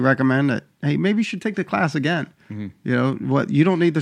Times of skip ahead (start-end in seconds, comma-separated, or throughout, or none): none